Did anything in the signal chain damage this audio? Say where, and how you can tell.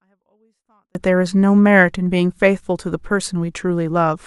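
Yes, a 24-bit alignment error at sample-format conversion: 0 to 0.95 s sits clean but about 48 dB down, since low-byte 24-bit samples were read as full 32-bit words.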